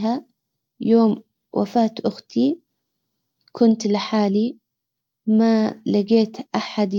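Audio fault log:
No faults detected in this speech recording.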